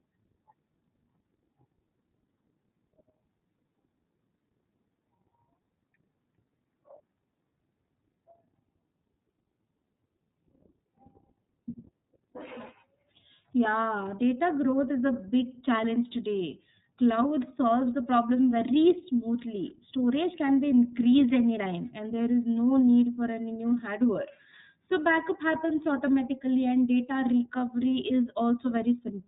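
From start to finish the speech sounds boxed-in and slightly buzzy, with a rough, synthetic edge on every syllable and nothing audible above about 3.8 kHz. This is iLBC codec damage, plainly audible throughout. The narrowband coder strips the upper band, then codes each 30 ms frame's excitation independently of the previous one. The character fits a bitrate near 13.33 kbps, where that frame-by-frame modelling leaves the texture coarse.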